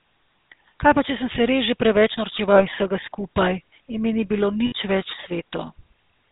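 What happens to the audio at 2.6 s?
From 2.52 to 2.64 s, between "se res že preveč" and "iz vsega skupaj", there are lost GSM frames. The decoder replays the last good frame's settings, so the sound briefly holds as a rough, metallic ring, which fits two lost 20 ms frames. Unlike a dropout, the gap is filled with this ring and never goes silent. The buzzy, gravelly texture around it comes from the GSM full-rate codec, which cuts everything above 4 kHz across the whole clip.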